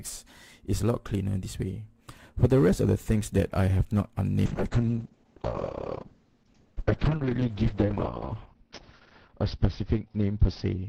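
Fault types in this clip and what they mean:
call bitrate drop: From 4.49 s to the end, a falling bandwidth estimate forces the encoder from 64 kbps down to 6 kbps, staying at its lowest for about 3.6 s. Coarser coding makes the sound rough and watery, and the band narrows from 20 kHz to 6 kHz, so everything turns muffled. On a spectrogram, energy above 6 kHz vanishes once the bitrate bottoms out, leaving a hard flat ceiling with smeared, blocky detail beneath it.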